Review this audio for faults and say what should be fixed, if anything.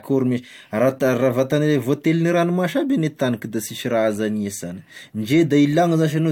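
Nothing needs fixing: the speech signal holds steady throughout, with no audible faults in level, timing or continuity.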